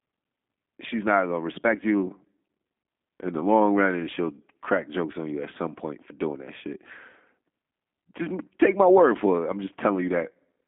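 From start to end the speech carries G.729 codec damage: an 8 kbit/s model rebuilds it from filter, pitch and sparse pulses, sounding rough and synthetic, with nothing above 3.7 kHz.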